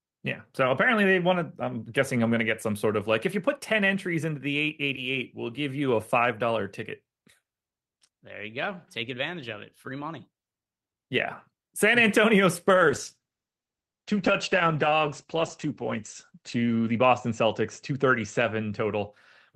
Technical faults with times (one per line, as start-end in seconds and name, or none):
12.75-19.17 call bitrate drop